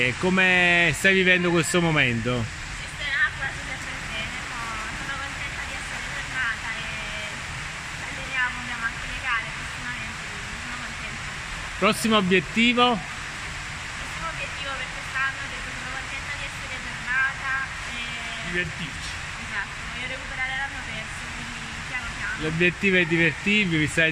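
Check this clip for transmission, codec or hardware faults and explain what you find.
One hardware fault is present: USB whine from 1.61 to 4.00 s. Bus microframe current leaks into the audio power or ground, producing a fixed 8 kHz whine, strongest at 16 kHz, about 35 dB below the signal. Unlike mains hum, it sits high, not at 50 or 60 Hz.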